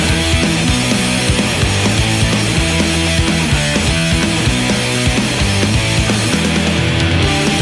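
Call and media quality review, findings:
No dropouts, level jumps, clipping, timing breaks or other transport or processing faults detected anywhere in the signal.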